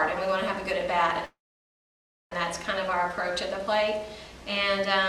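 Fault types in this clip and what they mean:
Call audio freeze: from 1.25 to 2.32 s the sound stalls, a brief fading buzz of the last sound dropping to silence for about 0.96 s, likely from delayed packets draining the jitter buffer; playback then resumes where it stopped, about 1.06 s later, with nothing lost.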